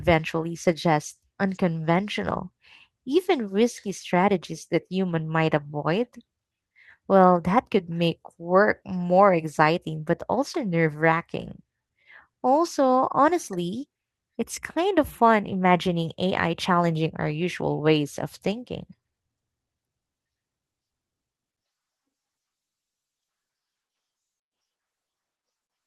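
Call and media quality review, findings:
No faults found in the speech recording. Nothing to raise against any component.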